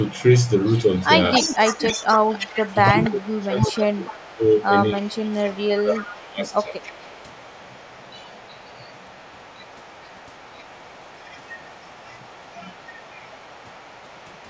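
Speech with an echo leak: a delayed copy trails the talker by 290 ms, from 0.03 to 1.04, 1.33 to 4.65, 4.88 to 5.6 and 5.76 s to the end. The echo is strongest, only about 10 dB below the speech, in the 1.33 to 4.65 s stretch, and elsewhere sits roughly 25 to 30 dB down. It is likely a far-end loudspeaker whose echo canceller lets part of its pickup return. Speech suppressed in double talk also occurs, with the talker's level dipping at 1.56 to 2.13, 2.67 to 4.44, 4.93 to 6.49 and 6.68 to 6.78 s. The drops reach around 20 to 25 dB in the two longer stretches, likely because the canceller turns down both signals while they overlap.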